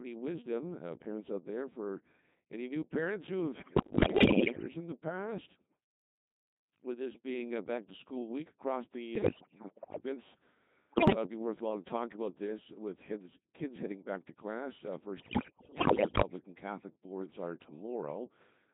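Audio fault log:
throughout: Codec 2 vocoder at 2.4 kbit/s, heavily damaged; only pitch, voicing, energy and envelope survive, so sine-wave resynthesis makes the speech robotic and buzzy.
3.62–4.68 s, 9.16–10.04 s, 10.90–11.16 s, 15.18–16.22 s: bit errors on digital voice radio, about 10 to 20 percent of bits flipped; corrupted frame parameters throw pitch, level and tone around, giving bleeps and warbling gibberish. The first burst falls between "new parents who have" and "in the past", the second follows "to school week across", the third comes just before "it'd be worthwhile to".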